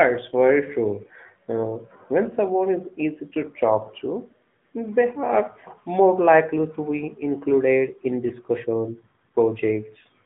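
The whole clip runs through the AMR narrowband mobile codec, so the speech is squeezed into a band from about 150 Hz to 3.4 kHz and has a plainly buzzy, synthetic edge from the vocal-tract model. The coarseness fits a 10.2 kbps mode.

At 8.28 to 8.31 s, just after "be included in", there's a lost AMR speech frame. The decoder covers the gap by repeating its last settings at lower gain, which you hear as a brief dip or warble. It sounds like a single 20 ms frame went missing.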